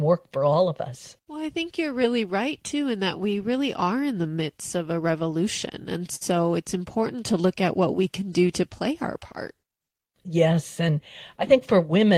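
At 6.15 s, just before "it's important to look", a short stall from a late packet holds the sound for about 58 ms, until 6.23 s. The packet arrived late, the jitter buffer ran dry, and the receiver stretched the last sound rather than drop anything. Playback then resumed from the same point, now 58 ms later. It is heard as a brief hold with a faint buzz or dip. A spectrogram shows the harmonics frozen as flat horizontal bands, and the waveform shows repeated, near-identical cycles.

From 11.49 s to 12.04 s a jitter buffer speed-up runs the speech at about 107% of normal pace while the pitch stays the same. Too much audio had built up in the buffer, so the receiver trimmed whole pitch periods, one or a few at a time, many times in a row, removing about 50 ms in total. The speech sounds slightly hurried. On the waveform small splice points appear where periods were cut, and on a spectrogram the syllables look compressed in time while the harmonic spacing does not change.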